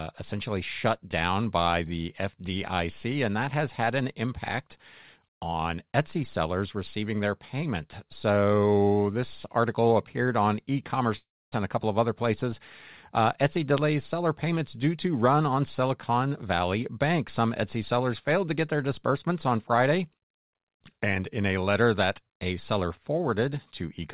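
At 11.16 s the sound breaks off, and a fading buzz carries the last moment forward before dying into near-silence for roughly a quarter of a second. It picks up again at 11.55 s with about 0.36 s simply gone. That's the signature of a long network dropout, likely packets that never reached the receiver, with the concealment stretching the last sound until it ran out. Nothing is audible above 4 kHz, which points to a G.711 mu-law call path at 64 kbps.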